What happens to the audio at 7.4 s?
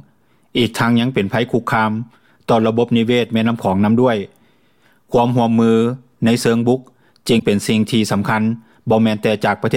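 At about 7.38 to 7.43 s the audio jumps ahead with a brief garbled glitch, likely a broken MP3 bit reservoir: frames went missing, so the next ones borrowed data from the wrong bytes. The roughly 44 ms span fits a couple of 26.1 ms MP3 frames.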